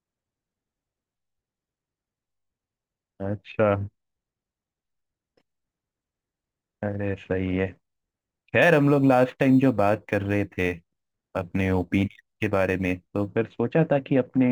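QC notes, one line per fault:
8.62 to 13.28 s, crude rate conversion: the speech picks up a gritty, inharmonic fizz that rides on loud and bright syllables. Samples appear to be dropped by nearest-neighbour picking with no filter, which fits a 48 kHz to 44.1 kHz change. The skipped samples form a regular pattern, producing tones unrelated to the voice about 30 dB below it. On a spectrogram, faint mirrored lines cut across the harmonics. Zoomed in, the waveform shows small periodic jumps.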